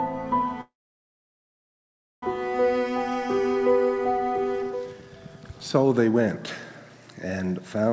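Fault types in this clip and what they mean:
call audio freeze: Incoming packets were likely held up and the jitter buffer ran dry, so from 0.61 to 2.23 s the receiver stretched the last sound into a short fading tail, then about 1.5 s of silence, before resuming where it stopped with nothing lost.
jitter buffer speed-up: With surplus audio queued, the receiver cut out pitch-period slices to reduce delay. The sound hurries at unchanged pitch, running 9% fast from 4.62 to 5.99 s and shedding around 150 ms, then 53% fast in the final 0.06 s.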